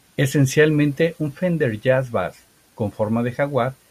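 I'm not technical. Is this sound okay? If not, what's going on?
Yes, nothing wrong is audible anywhere in this speech recording.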